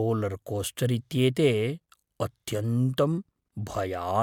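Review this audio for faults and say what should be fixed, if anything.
No faults turn up anywhere in this speech recording, so nothing needs to be fixed. With no fault to trace back to a cause, no change to the recording or processing chain is called for.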